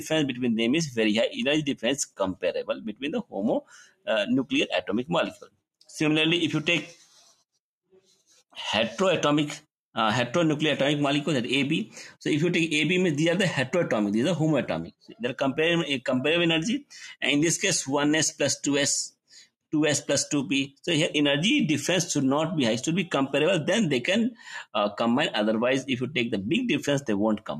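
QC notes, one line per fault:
Throughout: noise suppressor applied to music or sounds. A suppressor built for speech stays active across the whole clip. It treats steady tones, ambience and decay as noise and pulls them down. Attacks pass fairly intact while sustained parts sink. The gain keeps shifting by roughly 5 dB, so the sound pumps and thins rather than holding a stable level.
1.75–4.08 s, 4.44–5.89 s, 6.98–7.42 s, 7.92–8.55 s, 14.88–15.18 s, 19.1–19.73 s: sound cut by the noise suppressor. In each span the suppressor judged the sound to be noise and turned it down harder than its surroundings. Drops reach about 21 dB in the first two and last two spans, about 11 dB at 6.98 s and about 15 dB at 7.92 s. Held and fading parts dip or lose their tails. The first span holds the longest stretch of loss.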